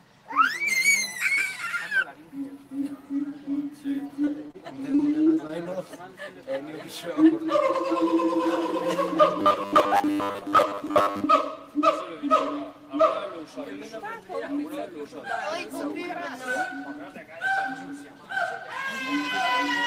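From 4.07 to 4.56 s and again from 4.92 to 5.67 s there is repeated packet loss, heard as choppy, robotic sound. Short pieces of audio went missing one after another, the longest about 32 ms, and each gap was patched by stretching out the sound just before it. The result is a stuttering, metallic texture. On a spectrogram these stretches show brief smeared or frozen bands interrupting the normal detail. The waveform shows clipped-off segments followed by copies of the preceding cycles.

Overlapping the second burst, from 5.01 to 6.02 s, the jitter buffer slows down. The receiver was short of stored audio and built up a reserve by repeating single pitch periods and bits of quiet, adding about 76 ms in all. Playback runs at 93% speed with the pitch unchanged, so sounds feel drawn out. A spectrogram shows harmonics that hold steady but are horizontally stretched. The waveform contains runs of near-identical repeated cycles.

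From 9.40 to 11.24 s the sound becomes a rigid, robotic buzz from repeated short buffers. Fresh audio arrived too rarely, so the same short slice was played again and again for most of this span while the real material was skipped. The buzz sits at 100 Hz, likely caused by a buffer of about 10 ms being looped. On a spectrogram this appears as evenly spaced harmonics at multiples of 100 Hz that stay flat regardless of the underlying sound. The waveform shows a strict 10 ms periodicity.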